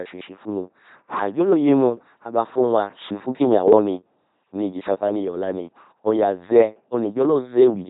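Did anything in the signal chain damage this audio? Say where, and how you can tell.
Yes. The damage is at the codec stage, and it runs through the whole speech clip. This is the LPC-10 vocoder sound. The voice is a flat, buzzing robot tone, with heavy codec damage. Nothing is present above 3.8 kHz. Each moment is rebuilt as either a pulse-driven buzz or pure noise, so wrong voicing choices swap buzz and hiss. That behaviour fits a very low-rate vocoder around 2.4 kbit/s.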